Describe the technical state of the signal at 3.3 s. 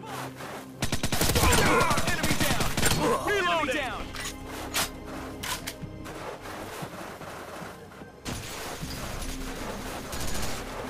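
At 3.27 to 3.30 s a corrupt frame is decoded: flipped bits in a single compressed frame were played back as if valid, so misread gains and codes place energy at the wrong frequencies for roughly one frame's length. It sounds like a brief chirp, squeak, blip or burst of noise peaking around -15 dBFS. Unlike a lost frame, which leaves a gap or a smoothed-over repeat, this one adds out-of-place energy, and it lasts longer and is less broadband than a sample-level click.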